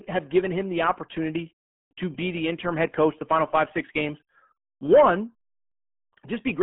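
From start to finish the speech carries RealAudio 14.4 codec damage, heavy throughout. Nothing survives above 3.8 kHz, and the band sits near 150 Hz to 3.4 kHz, so voices sound muffled and gargly, consistent with an 8 kbit/s dial-up speech codec.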